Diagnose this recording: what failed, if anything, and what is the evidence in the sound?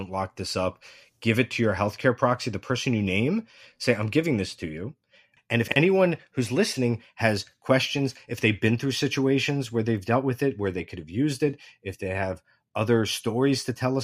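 Chunks out of order in the speech at 5.68 to 5.76 s, a buffer-stage fault: one 40 ms block played a chunk late, after its successor, leaving three hard joins and a brief jumble. Unlike a dropout, no audio is missing, only reordered.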